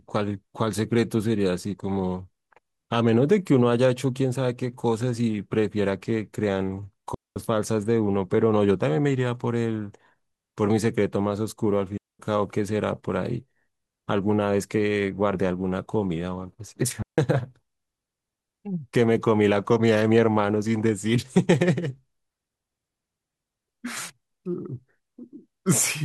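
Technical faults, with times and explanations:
7.14–7.36 s, 11.98–12.19 s and 17.02–17.18 s: digital wireless dropout. The speech cuts to near silence for about 220, 217 and 154 ms, a clean hole with no noise burst on either side, because the receiver lost too much data and muted briefly.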